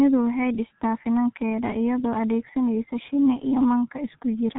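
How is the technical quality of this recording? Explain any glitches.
Quality is poor throughout, from heavy G.723.1 codec damage. Its 30 ms frames update slowly at a bitrate near 6 kbit/s, leaving nothing above about 3.8 kHz, so the speech sounds muffled and hoarse with smeared consonants.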